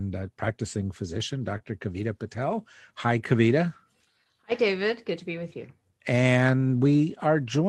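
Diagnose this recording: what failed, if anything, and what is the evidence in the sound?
Network stage, recovered by the codec. At 1.53 to 1.55 s there is a 20 ms stretch that sounds rougher and noisier than its surroundings, with no gap. This is a lost packet rebuilt from error correction. The next packet carried a low-bitrate copy, and the Opus decoder played it.

Network stage, hidden by the receiver. From 1.57 to 1.62 s there is a brief smear in the speech. This is short concealed packet loss. Audio arrived too late, and the receiver extended the preceding sound before blending back into the real signal.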